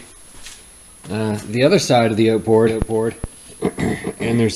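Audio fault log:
2.67 s to end, doubled audio track: a full-band copy about 5 dB quieter trails roughly 0.4 s behind with an abrupt onset, likely a second capture path; spectrogram shows every event repeated, shifted.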